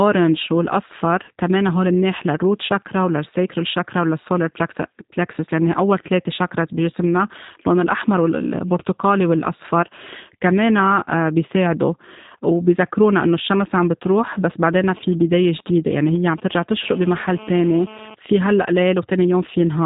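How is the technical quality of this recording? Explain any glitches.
The recording has clear technical faults: a low-bitrate speech codec throughout, and interference from a nearby mobile phone late in the clip.

The whole clip carries G.729 codec damage. The speech is band-limited with nothing above about 3.8 kHz, and it has the slightly rough, synthetic texture of speech rebuilt from a vocal tract filter, a pitch predictor and a few pulses per frame, which fits G.729A at 8 kbit/s. The artefacts are plainly audible: dull, boxy and a little buzzy rather than natural.

From 14.04 to 16.64 s there are GSM signalling bursts, roughly 20 dB below the speech. A 2G handset that is idle but signalling to its base station transmits short groups of radio bursts. The audio circuitry rectifies those pulses into the signal path, giving an irregular, galloping dit-dit-dit pattern of brief buzzes at the 217 Hz burst rate.

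From 16.83 to 18.15 s this turns into continuous GSM phone buzz, about 18 dB below the speech, as the phone moves into a call. It now transmits steadily at 217 bursts per second, and rectification of that RF produces a hard, raspy 217 Hz buzz rich in harmonics. The buzz is unrelated to the speech and sits underneath it until it stops.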